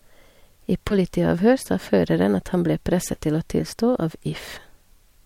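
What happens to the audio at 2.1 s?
Nothing goes wrong at 2.1 s: the speech plays through that moment intact, with no dropout, click or distortion.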